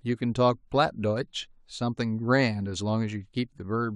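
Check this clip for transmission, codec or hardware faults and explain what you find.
Nothing wrong can be heard in the speech signal, which stays continuous, steady in level and intact from the first sound to the last.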